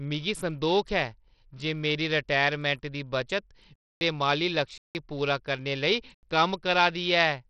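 From start to finish the speech carries a gritty, grainy edge with flickering, unstable treble and nothing above about 14.1 kHz, the heavy damage of Bluetooth SBC compression. The likely cause is a starved bit pool, consistent with roughly 64 kbps, leaving the upper sub-bands with few or no bits.

At 3.76 s the sound cuts abruptly to dead silence for 0.26 s until 4.01 s, then again from 4.78 to 4.95 s, a 0.17 s hole ending just before "गी पूरा करने", and once more from 6.14 to 6.23 s for 0.09 s. Each is a block of digital silence, cutting out and back with no fade. The lengths suggest whole output buffers, around 8192 and 4096 samples, that were not filled in time and went out as zeros.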